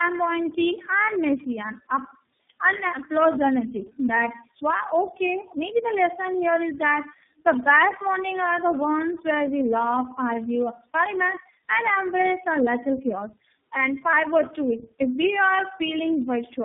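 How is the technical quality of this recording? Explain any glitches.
Pretty rough, and it stays that way through the whole clip. It's a clear case of tandem speech coding: the audio passed through about three low-rate speech codecs in a row, something like G.723.1, then G.729A, then iLBC, decoded and re-encoded at each hop. Every coder mangles the previous one's output, so it sounds muffled, gritty and warbly, with nothing above 3.7 kHz.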